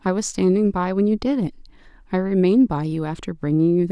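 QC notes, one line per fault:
Nothing to flag here; the speech comes through without any technical trouble worth noting.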